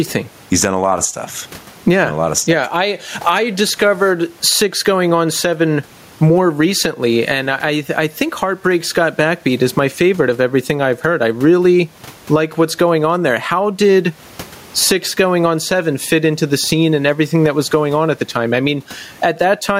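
Gain pumping runs through the whole speech recording. The room noise sits about 38 dB below the speech, and the gain swings by roughly 15 dB. The likely cause is microphone gain set far too high, with a fast limiter or compressor clamping down on each loud syllable and releasing in the gaps. Loud and quiet passages end up squeezed together, and the delivery sounds flattened.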